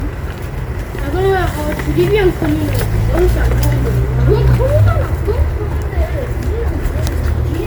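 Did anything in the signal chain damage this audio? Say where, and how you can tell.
Yes, at the codec stage: generation loss runs throughout, likely from about seven rounds of decoding and re-encoding as MP3 at 128 kbit/s. Each pass requantises on a shifted frame grid, so the sound turns swirly and hollow, with smeared attacks beyond what 128 kbit/s alone explains.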